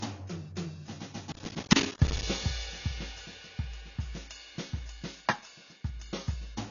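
The whole music clip sounds dull and smeared. Nothing is heard above 7 kHz. Sustained tones have a warbling, fizzy edge. This points to likely AAC compression at a low bitrate. The encoder dropped the top band and coarsely quantised the rest.

From 1.32 to 2.23 s, processor overload crackle tears through the music. The processor missed many short buffer deadlines in a row, which fits buffers of around 10 ms. Each miss left a tiny silent gap with hard edges. Together they form a gritty burst of crackle.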